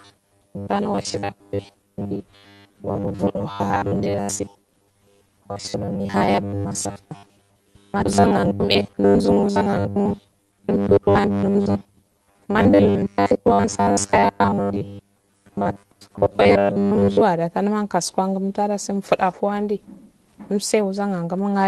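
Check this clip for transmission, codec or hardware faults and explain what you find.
Three faults are present, one of them spanning most of the clip.

From 0.01 to 17.2 s there is robotic sound from repeated short buffers. Short segments repeat most of the time, imposing a rigid 100 Hz metallic buzz, likely from a 10 ms buffer. A spectrogram would show a fixed 100 Hz harmonic comb.

Between 8.05 and 8.07 s there is a skip ahead. Roughly 0.4 s of audio is dropped and the two sides are spliced with no gap, leaving an abrupt jump in the waveform.

From 9.97 to 11.31 s there is a jitter buffer speed-up. Pitch periods are removed to run at 111 % speed, cutting about 0.15 s. The speech sounds hurried at an unchanged pitch, and the spectrogram shows compressed timing with the harmonics unmoved.

Throughout, the Opus call path limits content to about 12 kHz.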